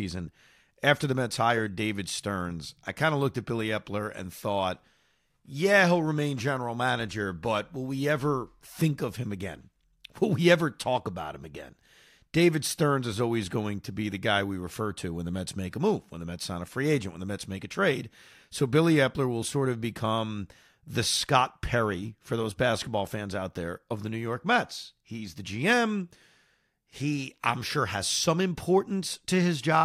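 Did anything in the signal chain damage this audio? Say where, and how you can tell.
No, nothing damaged this audio.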